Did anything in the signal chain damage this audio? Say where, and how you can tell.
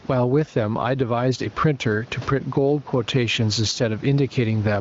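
Yes. Gain pumping runs through the whole clip: loud and soft parts sit closer in level and the sound is squashed, with a swing of around 10 dB. This is likely excessive input gain held back by a fast limiter in call processing.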